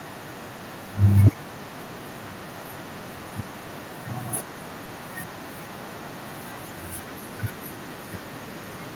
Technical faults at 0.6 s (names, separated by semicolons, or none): echo with no canceller; short concealed packet loss